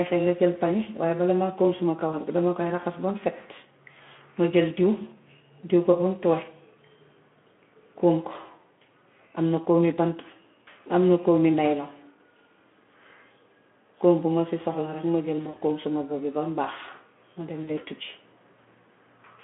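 At 2.09 s, 15.49 s (just after "ma jël ma" and before "kóom suma bob bi") and 17.63 s (just after "bam baax ma dem"), VoIP packet loss concealed by the speech codec breaks the speech. Each gap spans about 40 ms, which fits two lost 20 ms frames. The decoder carries forward its last pitch and filter at falling gain. The result is a brief fading smear that lingers roughly 0.1 s before the Speex-coded narrowband speech recovers.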